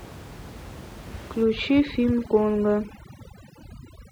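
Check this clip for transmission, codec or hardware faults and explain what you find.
One fault is present: overdone noise removal, starting at about 1.44 s and running to the end of the clip at 4.12 s. From that point, a noise reduction stage set far too aggressively clamps frequency bands down or off whenever they sit near its noise estimate. The room noise, about 18 dB below the speech before 1.44 s, drops and breaks up into twinkling specks. Quieter parts of the speech are removed along with it. What separates this from low-bitrate codec swirl is where the damage sits: the artefacts cluster in the pauses and in soft, low-level detail, while louder speech passes comparatively intact.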